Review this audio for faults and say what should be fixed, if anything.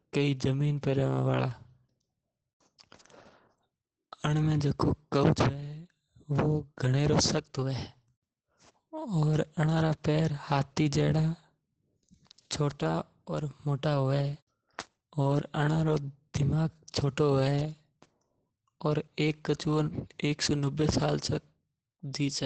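Opus voice compression is plainly audible across the whole speech clip. The audio stops at about 8.8 kHz, which points to SILK running in its wideband mode, and the excitation is coded coarsely enough to leave the speech muffled, slightly hoarse and faintly robotic. That degree of damage fits a bitrate of around 12 kbps. To prevent it, re-encode from the original source at a higher Opus bitrate, or keep an uncompressed master.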